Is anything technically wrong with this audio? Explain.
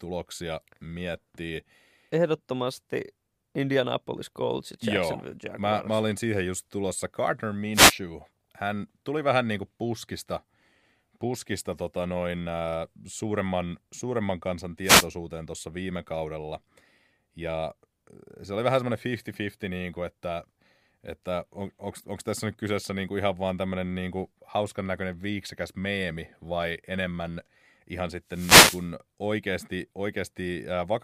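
Yes. Three brief swishes of static break through the speech at 7.73 to 7.95 s, 14.83 to 15.07 s (after "äh suuremman suuremman kansan", before "tuossa viime kaudella") and 28.27 to 28.89 s (after "meemi vai enemmän ihan"). These are wireless microphone noise hits: the FM radio link fades as reflections cancel, so receiver noise surges over the signal.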